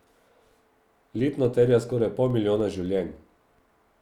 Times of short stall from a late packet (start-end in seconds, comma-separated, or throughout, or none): none